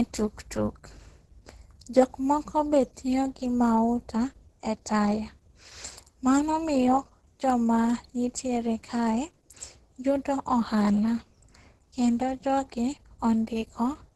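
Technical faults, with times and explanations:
Throughout, Opus compression: the speech sounds heavily damaged, muffled and hoarse, with a rough, grainy texture and nothing above 12.1 kHz. This likely comes from Opus in its hybrid speech mode at a very low rate, which fits around 12 kbps.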